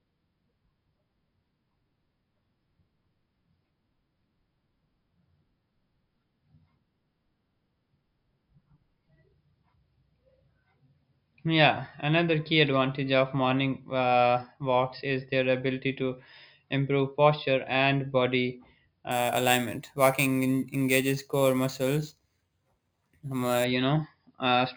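From 19.11 to 23.64 s, the speech carries imaging from sample-and-hold upsampling. The audio appears to have been raised from about 11 kHz to 48 kHz by simply repeating samples, with no smoothing filter. That leaves mirrored copies of the speech spectrum. The first copy sits between 5.5 and 11 kHz, at about 16 dB below the speech. It sounds like a bright, metallic fizz that rises and falls with the speech.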